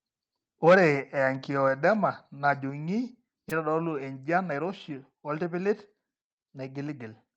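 From 0.66 to 0.87 s the input level was likely set too high for the converter: peaks overshoot the ceiling by about 7 dB and a noticeable share of samples get their tops sheared flat, giving the loudest syllables a harsh, crackling, buzzy edge.

At 0.69 s, right inside that distorted stretch, the microphone volume is stepped down by about 2 dB in a single jump. Both the voice and the background drop together at once, a small but abrupt change of level rather than a smooth fade.

Between 3.49 and 3.53 s, a short concealed packet loss occurs: about 20 ms of audio failed to arrive in time, and the receiver bridged roughly 17 ms of it by extending the preceding sound before blending back into the real signal. The result is a brief smear or wobble, a tiny hiccup in the speech, heard over the call path's upper limit of 8 kHz.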